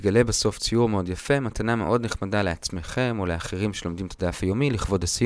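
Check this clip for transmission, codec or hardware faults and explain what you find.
No transmission, codec or hardware faults can be heard anywhere in the clip; the signal stays continuous and steady throughout.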